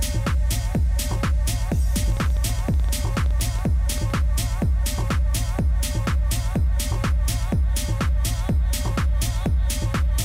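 From 2.12 to 4.18 s there's a train of clicks: roughly twenty near-identical pops at close to 9.8 per second, spaced unevenly rather than ticking like a clock. They peak at about the level of the sound itself, so they sit right on top and don't hide in the mix. Something is injecting short pulses into the signal, likely interference from nearby gear or a faulty connection or power supply.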